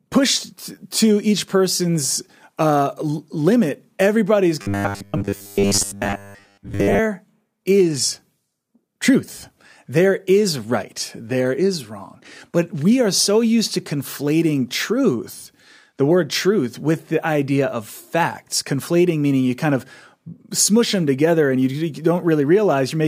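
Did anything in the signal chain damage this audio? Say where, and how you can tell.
Yes. From 4.62 to 7.00 s, right after "uh limit everybody is", the speech turns into robotic sound from repeated short buffers: a rigid metallic buzz locked at 100 Hz. The likely cause is a driver or buffer underrun, with roughly 10 ms blocks looping in place of most of the real audio.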